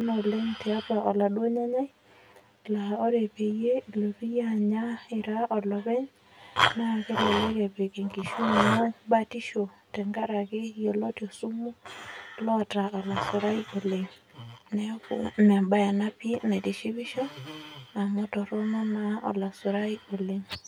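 From start to finish there's channel delay with comb filtering: one side runs around ten milliseconds behind the other, so summing to mono cancels the shared speech at evenly spaced frequencies, starting near 50 Hz. The result sounds hollow and phasey throughout.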